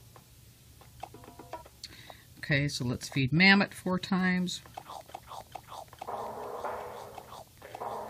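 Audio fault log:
5.41 s, overlap between stream segments: a tiny skip where the waveform jumps. The 2 s stream segments on either side carried overlapping time stamps, and the player trimmed about 12 ms of sound that was never actually duplicated, leaving an abrupt discontinuity.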